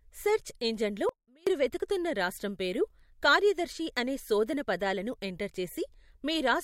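The signal was likely lost briefly while the path stayed live, giving an audio dropout to a faint residue from 1.09 to 1.47 s. After "సెర్చ్ ఇంజిన్లో", the speech cuts abruptly to a faint sound roughly 30 dB down until "వెదుకుతున్న రాష్ట్రం పేరు కార్యదర్శి".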